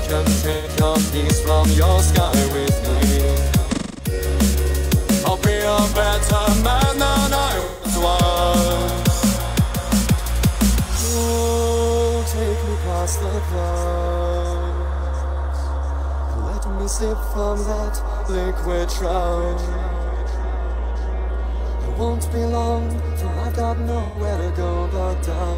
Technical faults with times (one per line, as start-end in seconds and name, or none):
0.52-0.69 AAC frame loss with concealment
3.71-4.13 AAC frame loss with concealment
7.60-7.93 AAC frame loss with concealment
24.03-24.19 AAC frame loss with concealment